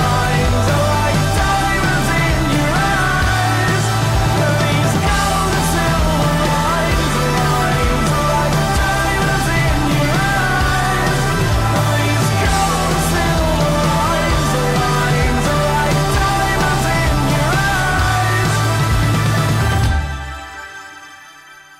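Word clock ticks run from 0.10 s to 21.63 s, a steady train of short, sharp clicks about every 0.4 s, around fifty in all. The receiving device is free-running on its own clock rather than locked to the digital source, with the two rates apart by something like 50 ppm. Each time the clocks slip past one another, a single sample is dropped or doubled, and that discontinuity is what produces each tick in the sound.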